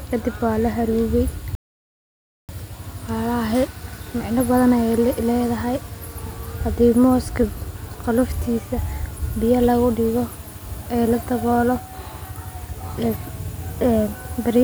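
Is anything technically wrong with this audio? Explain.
Yes. There is an audio dropout to silence from 1.55 to 2.49 s, a gap of about 0.94 s. The input feeding the recording was most likely interrupted for that stretch, by a disconnect, a failed link or an accidental mute, while the recorder kept writing silence. The speech cuts off abruptly mid-flow and resumes just as suddenly, and the gap between is dead silence with no room tone at all. Whatever was spoken in that interval is lost.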